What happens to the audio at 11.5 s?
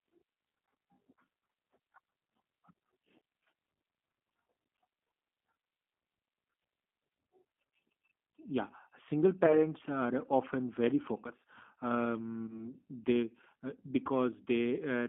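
At 11.5 s the speech carries the G.729 codec damage present throughout the clip: a telephone band of about 200 Hz to 3.5 kHz and a plainly rough, synthetic timbre, consistent with 8 kbit/s coding that rebuilds each frame from a vocal-tract filter, a pitch predictor and sparse pulses.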